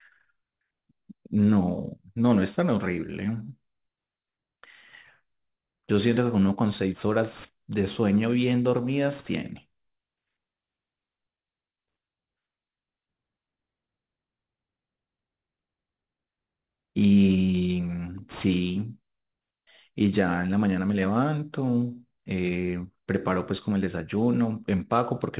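Aliasing runs through the whole recording. The speech was brought down to a lower sample rate with no anti-aliasing filter first, which fits a drop to 8 kHz. Everything above the 4 kHz folding point has been mirrored back below it as false, unrelated frequencies, around 30 dB under the speech. Sibilants come out gritty and metallic rather than crisp, and the spectrum stays dense right up to the 4 kHz band edge instead of rolling off.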